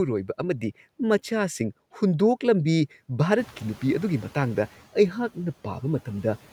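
It's a speech clip with a noise suppressor catching up. The room noise jumps by about 16 dB at around three and a half seconds, and from 3.37 to 4.68 s that louder background comes through only partly reduced because the suppressor's noise estimate is still tracking the old, quieter level. Over that 1.3 s it adapts, and the noise sinks by about 6 dB; after the jump, the room noise itself sits roughly 23 dB below the speech.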